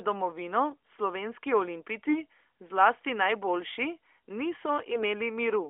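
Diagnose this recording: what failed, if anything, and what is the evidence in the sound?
The radio link failed briefly: AMR bit errors from 4.92 to 5.04 s turn the narrowband speech hoarse and gargly, with pitch and level intact, fitting a weak link that flipped several percent of the bits.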